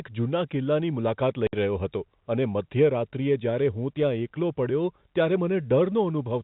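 At 1.47 s, packet loss filled with silence cuts a 60 ms hole in the speech, likely two lost 30 ms packets, ending abruptly with hard edges.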